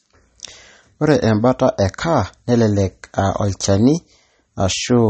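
From start to finish the speech sounds watery and swirly, with nothing above about 8.4 kHz, so s sounds lose their sharpness and take on a metallic, chirpy edge while consonant attacks smear. The likely cause is MP3 compression at a bitrate low enough to fit roughly 34 kbps. Starved of bits, the encoder cuts the treble at a fixed point and drops weak frequency lines that flicker on and off from frame to frame, producing that swirling texture.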